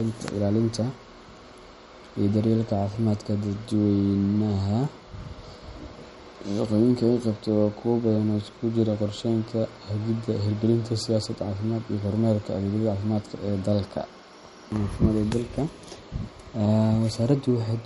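A speech clip with MP3 compression damage that is plainly audible from start to finish. Nothing is present above 11.2 kHz, so the top of the spectrum is sharply cut off and s sounds lose their crispness. Weak frequency components drop in and out from frame to frame, giving a watery, swirly texture. The sound is likely the result of low-bitrate MP3 encoding, which fits a rate of around 45 kbps.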